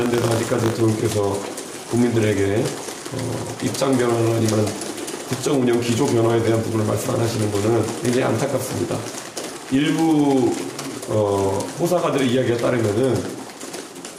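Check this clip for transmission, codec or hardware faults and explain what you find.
Two faults are present: buffer tearing at the very start and gain pumping across the whole clip.

From 0.0 to 0.8 s there is buffer tearing: writer and reader of the ring buffer cross each period, splicing a tiny sliver of audio from around 40 ms earlier. The result is a 50 Hz robotic buzz, fitting a 20 ms period, seen as regular vertical clicks on a spectrogram.

Gain pumping runs throughout, likely from gain set far too high feeding a fast limiter. The gain swings by about 5 dB, pulled down under each loud sound. The waveform looks flattened.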